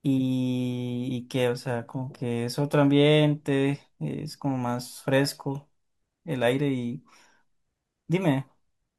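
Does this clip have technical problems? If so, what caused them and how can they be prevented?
No, no technical problems heard.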